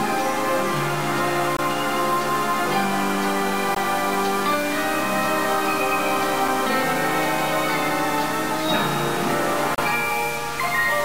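From start to finish the sound has a distortion, and the quiet stretches fill with a noise floor instead of going silent. This points to a stuck bit, likely one data line held at a fixed value, so about half the samples are offset by that bit's weight. On a waveform the trace shows small steps and a fuzzy baseline in pauses. A spectrogram shows broadband hash smeared across all frequencies.

Four brief dropouts cut into the continuous sound: 1.57 to 1.59 s (about 21 ms), 3.75 s (about 18 ms), 6.48 s (about 5.5 ms), and 9.75 to 9.78 s (about 33 ms). Each is a gap at a join of encoded pieces. Separately encoded segments were spliced with their encoder start delay and final-frame padding left in. The sound stops for a tick, then resumes where it left off. A waveform shows a flat notch with slightly softened edges, and a spectrogram shows a thin vertical blank stripe.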